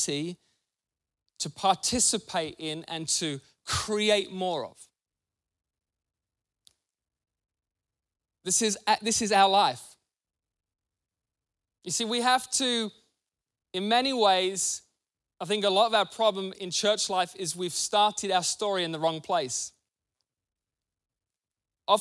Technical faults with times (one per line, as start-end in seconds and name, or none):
none